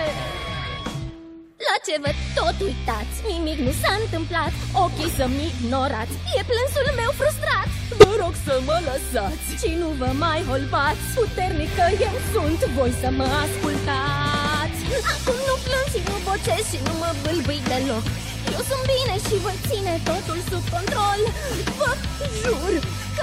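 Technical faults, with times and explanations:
7.99–8.04 s, corrupt frame decoded: the decoder played a couple of damaged frames with flipped bits, placing energy at wrong frequencies, giving a sharp burst.
21.91–21.96 s, compressed frames skipped: frames were left out and playback jumped ahead about 20 ms.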